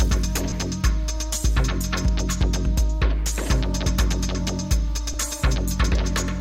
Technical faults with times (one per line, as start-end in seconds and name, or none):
0.50-0.52 lost LE Audio frames
5.13 lost LE Audio frames